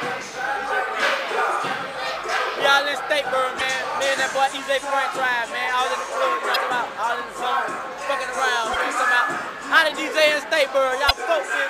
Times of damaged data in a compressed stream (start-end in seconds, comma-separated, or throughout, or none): 3.57-3.61, 6.52-6.56, 8.73-8.76, 11.07-11.11